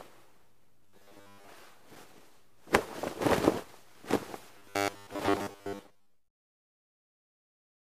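From 0.86 to 1.48 s and 4.58 to 6.28 s, robotic sound from repeated short buffers gives a stiff 100 Hz buzz, likely a 10 ms chunk looping while most of the real audio is skipped.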